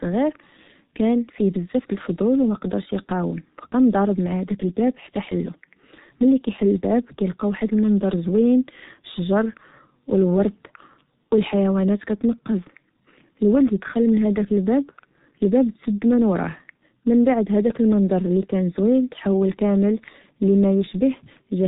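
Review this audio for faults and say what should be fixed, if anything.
G.723.1 codec damage runs throughout: nothing passes above 3.8 kHz, and the slow-updating coder leaves speech muffled and hoarse with blurred consonants, which fits a bitrate near 6 kbit/s. A spectrogram shows a flat ceiling at 3.8 kHz. Use a wideband, higher-bitrate codec.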